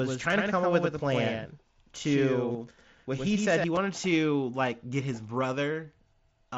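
From the very start the speech is already doubled, and that runs until about 3.64 s, where the second copy cuts off abruptly. This is a doubled audio track: a full-band copy sits roughly a tenth of a second behind the original and about 5 dB quieter, with no decay or room colour on it. It's likely a second capture through a slower path, or two out-of-step copies left in an edit.

Layered on top is concealed Bluetooth headset packet loss. A 7.5 ms gap at 0.32 s is almost invisible. A longer 22.5 ms loss from 2.53 to 2.55 s is the clearest one, with a short buzzy, held-level patch and a slight warble as real audio returns. A 15 ms loss at 3.75 s lands just before "to like get his". In each case the receiver filled the hole by repeating the best-matching bit of recent waveform. The mSBC wideband link itself is carrying the sound up to 8 kHz with only light grain.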